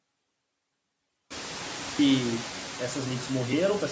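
Noise suppressor artifacts run through the whole clip. The suppressor pulls down, frame by frame, each band it judges to be steady noise, by about 21 dB, so the background sinks in the gaps and swells back under the speech. This pumping is easier to hear once the room noise rises by about 20 dB at around one and a half seconds.

From 0.00 to 1.99 s the speech drops by about 32 dB and sounds faint, as if only a residue remains. This is likely one channel inverted: with one stereo side's polarity flipped, the shared centre content cancels when the channels are summed to mono.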